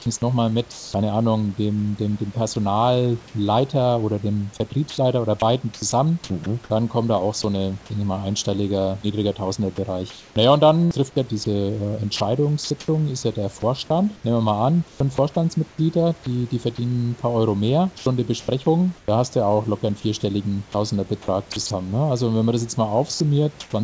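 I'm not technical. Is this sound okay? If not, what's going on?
No. Some bits of speech vanish into a soft hiss: sound dropped by the voice detector, at 0.72–0.94 s after "es nochmal", at 2.54 s, and at 23.14–23.20 s after "wenn man das jetzt". The call likely mistook them for background and stopped sending.

Elsewhere the speech turns choppy, with edges clipped and hiss flickering in. This is sound chopped by the voice detector, at 4.9–7.44 s, 9.76–15.78 s (between "ich mal einstelliger niedriger" and "die die verdienen ein"), and 20.72–21.70 s. The detector likely kept switching sending on and off.

At 17.98–19.08 s and 23.14–23.72 s, the pauses sound flat and artificial. This is comfort noise in place of the background, likely fake hiss filling gaps where nothing was sent.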